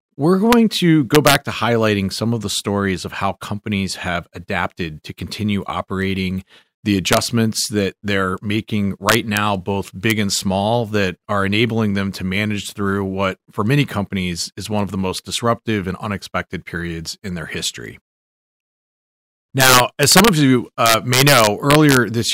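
Integer overflow cracks the speech at 0.53, 1.15–1.35, 7.13–7.17, 9.09–9.37, 10.10, 19.6–20.28 and 20.86–21.97 s. Peaks up to about 9 dB past full scale wrap to the opposite sign, appearing as full-height polarity jumps and broadband vertical streaks.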